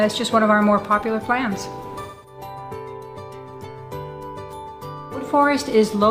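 From 2.01 to 2.38 s, AAC frame loss with concealment rebuilds missing frames from the last good spectrum, leaving a smeared, noisy patch rather than a clean silent gap.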